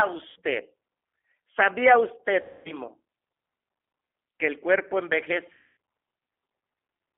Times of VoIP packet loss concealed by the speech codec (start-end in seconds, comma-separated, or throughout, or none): 0.30-0.36, 2.41-2.74, 5.53-5.76